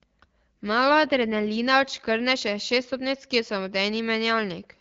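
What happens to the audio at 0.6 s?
Nothing goes wrong at 0.6 s: the speech there is intact, carried cleanly through the AMR wideband (HD Voice) codec at 12.65 kbit/s, a rate at which it stays clear.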